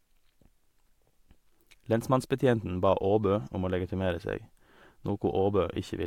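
No technical faults can be heard anywhere in the recording; the signal stays continuous and intact throughout.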